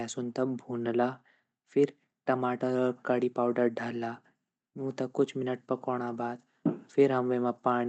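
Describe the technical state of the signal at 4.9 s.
At 4.9 s the speech signal is intact, with no fault present as it passes through the call path.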